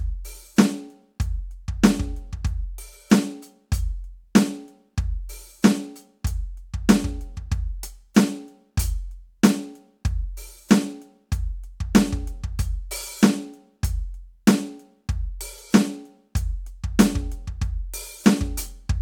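Nothing in this music stood out as a technical problem on listening.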